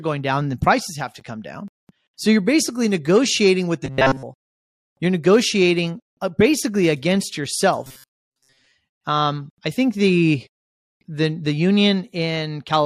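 Right after "basically negotiating with the", from 3.85 to 4.24 s, the speech turns into a rigid, metallic buzz at 133 Hz, and it returns for longer after "negotiating uh basically against", from 7.83 to 8.72 s. This robotic sound from repeated short buffers is likely caused by audio arriving too seldom: a stretch of about 7.5 ms is looped, imposing that fixed rate, while most of the real audio in between is skipped.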